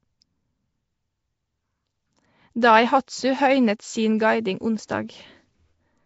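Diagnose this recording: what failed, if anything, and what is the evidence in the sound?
Speech is rough and smeared throughout, with a hissy halo and nothing above 7.7 kHz: likely Nellymoser compression at the codec, noise-filling starved bands.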